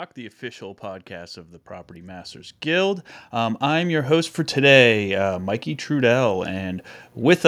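Speech, and from about 0.15 s to 4.4 s you can hear the automatic gain rising: the level creeps up by roughly 16 dB over those four-odd seconds, and the room noise swells right along with the voice. That's the AGC deciding the input was too quiet and slowly winding its gain up, so everything behind the talker gets lifted just as much as the talker does.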